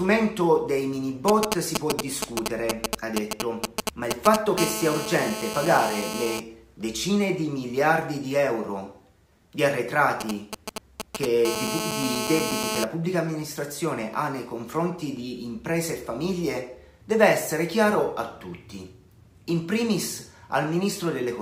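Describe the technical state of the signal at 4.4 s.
A nearby 2G phone's GSM signalling bursts, rectified by the audio circuitry from 1.28 to 4.59 s, lay galloping ticks and 217 Hz buzzes over the sound at roughly its own level.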